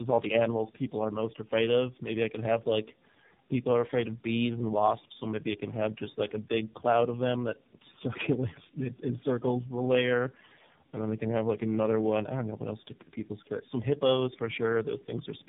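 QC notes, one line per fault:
Throughout, tandem speech coding: rough, muffled, warbly speech with nothing above 3.8 kHz, from three speech codecs in a row, ending in AMR-NB, each recoding the last one's damage.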